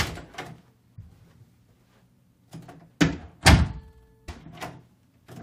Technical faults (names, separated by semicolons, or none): stream segment skipped